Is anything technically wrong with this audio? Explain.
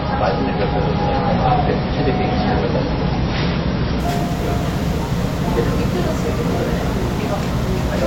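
Yes. Adaptive stream starting at a low bitrate, from 0.0 to 4.0 s: playback began on a cheap rendition so it could start at once, then switched up after the connection had been gauged. Until the switch, nothing above about 5.8 kHz survives, leaving the sound dull and muffled, with heavier codec smearing and swirl, which fits an MP3 stream around 24 kbit/s. At 4.0 s the treble and clarity return abruptly, without a gap, consistent with a step to roughly 128 kbit/s.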